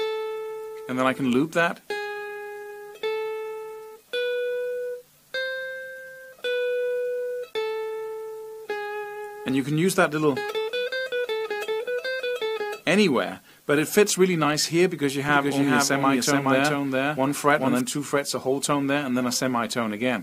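A doubled audio track runs from 15.29 s to 17.81 s: a second, full-band copy of the sound trails the original by around 400 ms at about the same loudness, likely because the audio was captured again through a slower path. Unlike an echo or reverb, it is a single repeat with no decay or room colour, and it switches on and off abruptly rather than fading.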